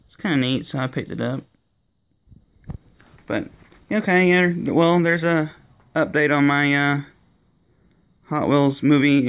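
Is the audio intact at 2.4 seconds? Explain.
Yes, the audio is intact at 2.4 seconds, with nothing at that moment that breaks up, drops out or distorts.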